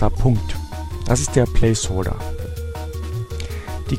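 At 2.45 s the sound jumps slightly forward with no gap of silence. This is likely a dropped buffer (overrun): a few milliseconds of audio were overwritten before being read, and the surviving sides were joined directly.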